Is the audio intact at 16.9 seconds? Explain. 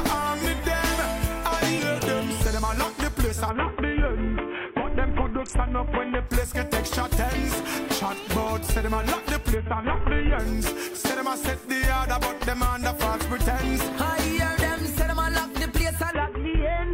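No. From 16.11 s to the clip's end at 16.93 s there is a Bluetooth SBC bit pool drop. The dull, gritty sound fits a link starved to about 50 kbps, leaving too few bits to code the upper sub-bands. On a spectrogram the treble region goes abruptly blank and the remaining bands turn speckled.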